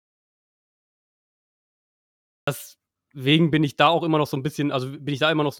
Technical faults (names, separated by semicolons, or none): audio dropout to silence